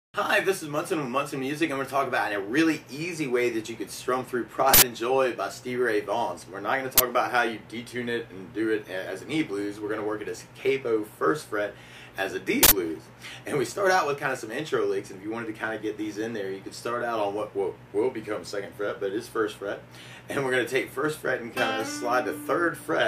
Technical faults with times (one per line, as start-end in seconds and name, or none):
4.74-4.82 uninitialised buffer
6.98-7.00 uninitialised buffer
12.63-12.71 uninitialised buffer